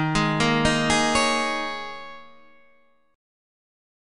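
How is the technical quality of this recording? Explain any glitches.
The technical quality of this recording is sound, with no glitches to explain.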